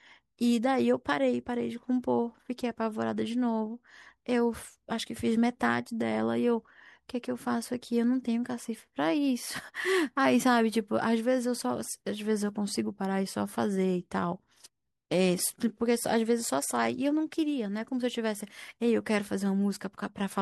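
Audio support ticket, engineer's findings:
No faults found on playback.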